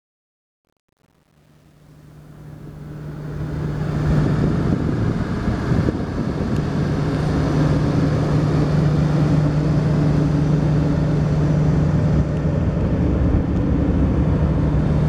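From 0.0 to 4.2 s the fade-in shows truncation distortion: a 9-bit gain stage without dither makes the quiet start gritty, worst until 3.09 s, unlike a clean gate.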